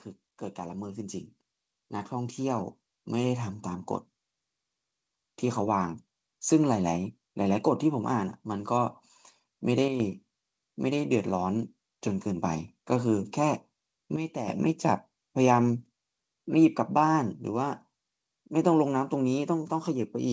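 Automatic gain rising, from 0.57 to 6.07 s: the gain control treated the incoming speech as too quiet and raised its gain slowly over about five and a half seconds, for a total lift of about 10 dB. The voice and the background noise swell together, so the room seems to creep closer rather than the talker simply speaking up. Because the rise is gradual, there is no step to point to, only a steady climb in loudness and noise floor.

Sudden gain jumps occur at 9.88 to 10.0 s, where the level drops by about 6 dB, and at 14.16 to 14.48 s, where it drops by about 9 dB. At each point speech and background fall together almost instantly rather than fading. That abruptness points to a digital gain change likely applied without a ramp, such as a new setting or a bit shift taking effect between one sample and the next. The second drop is deeper. Through all of this the call codec path shows its usual coding texture, with no content above 8 kHz, which fits a wideband codec such as G.722.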